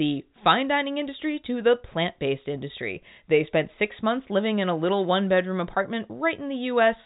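Nothing goes wrong anywhere in this speech; it just has the familiar narrow band of G.711 telephone coding, with nothing coming through above 3.8 kHz.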